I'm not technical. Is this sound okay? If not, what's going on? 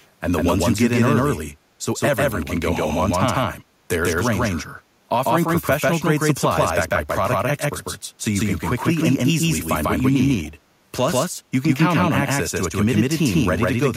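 No. The speech was most likely recorded twice, once through a slower route, so a doubled audio track runs throughout: a second, equally loud copy trails about 150 milliseconds behind.

There is also a brief echo leak at 0.0 and 10.43 seconds. Someone's loudspeaker was likely heard by their own microphone, so a very faint, split-second echo arrives 171 milliseconds late.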